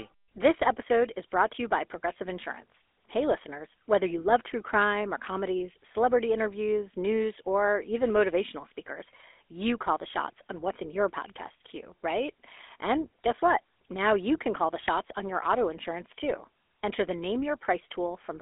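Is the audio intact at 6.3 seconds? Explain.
No. At 6.3 s, as throughout the clip, the speech carries GSM full-rate codec damage: the vocal tract is modelled and excited by sparse regular pulses, giving a plainly buzzy, gravelly roughness, consistent with 13 kbps coding. Nothing passes above 3.8 kHz, and the line band spans 300 Hz to 3.6 kHz.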